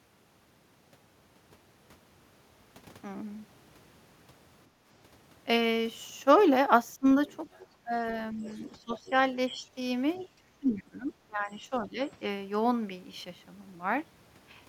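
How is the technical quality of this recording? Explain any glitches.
The recording has some echo-canceller trouble in the middle stretch, from about 4.7 s to 12 s, with three kinds of glitch mixed together.

First, the background gated by the echo canceller at 4.71 to 4.84 s. The room tone dips by about 9 dB for roughly 150 ms and then comes back. What's happening is the canceller decides the loudspeaker is active and clamps the mic down hard, so the ambience briefly drops out before it releases.

Then there's speech suppressed in double talk, four times: 6.99 to 7.05 s (about 20 dB down, around 70 ms), 7.84 to 7.93 s (about 15 dB), 8.33 to 9.65 s (a shallower dip of about 5 dB, adding up to around half a second), and 10.38 to 11.99 s (about 20 dB, roughly a second and a half affected). The talker audibly ducks and fades in those spots. The likely cause is both ends talking at once, with the canceller unable to tell the local voice from the loudspeaker echo, so it turns everything down together.

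Last, the other side's voice leaking through, at 7.28 to 7.67 s, 8.39 to 9.11 s, and 10.15 to 10.27 s. A faint second voice sits under the main one, about 25 dB down in the first two and about 30 dB down in the last, short scrap. That's likely loudspeaker playback reaching the mic and not being fully removed. Note how the 8.39 s leak lands inside a suppression stretch, which fits the canceller struggling during overlap.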